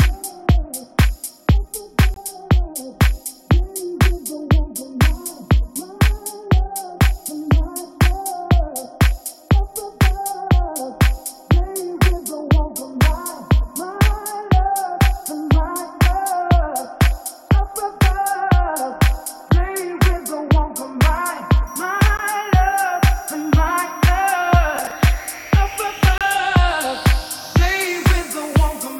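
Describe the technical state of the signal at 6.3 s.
At 6.3 s the signal is intact, with no dropout, distortion, glitch or other technical fault audible at that moment.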